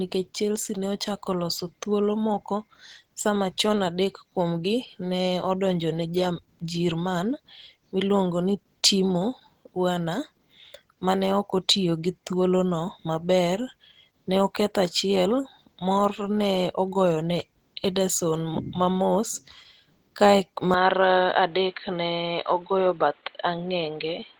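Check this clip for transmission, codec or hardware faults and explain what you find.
Two faults are audible: codec damage across the whole speech clip, and a change of input near the end.

Opus compression, throughout. The speech has a rough, hoarse, grainy texture, yet content still reaches about 20.1 kHz, so the band is not narrowed. That combination fits Opus in its hybrid mode, where a speech-style coder handles the low band and band-energy coding fills the top, likely at a low bitrate around 16 kbps. With so few bits, fine detail is replaced by approximated or noise-filled bands, which is what makes the voice sound coarse rather than swirly.

Input switched to a poorer device, from 20.74 s to the end. The sound turns abruptly dull, with nothing above about 4.4 kHz. The level drops by roughly 5 dB, and a new noise floor appears some 35 dB below the speech. There is no silence at the changeover. 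The likely cause is the system moving its input to another microphone or a headset call profile, whose narrower passband, lower gain and own self-noise account for the sudden muffling and the added background noise.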